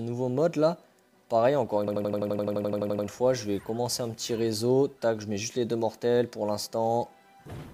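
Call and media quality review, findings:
System hang loop, 1.88 to 3.07 s: one 85 ms slice repeats 14 times, a stutter at 11.7 Hz. Driver froze with hardware replaying a ring buffer, consistent with 4096 samples. Essentially no audio lost.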